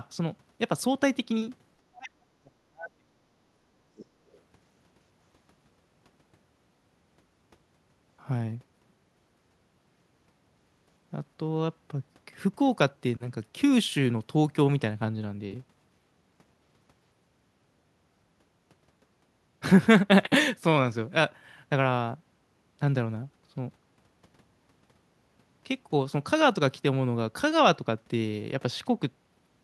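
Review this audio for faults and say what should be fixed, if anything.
Speech suppressed in double talk occurs from 1.84 to 3.32 s and from 3.71 to 4.16 s. The speech drops sharply, by up to about 40 dB in the first stretch and about 35 dB in the second. The likely cause is an echo canceller that could not tell the talker from loudspeaker echo while both sides spoke, so it turned everything down.

The other side's voice leaking through is heard from 4.32 to 4.40 s. It is a brief, faint scrap, roughly 35 dB below the speech. It likely comes from loudspeaker sound reaching the microphone that the echo canceller did not fully remove.

To prevent both faults, use a headset or better echo cancellation with double-talk detection, so the canceller neither mutes the talker nor passes the echo through.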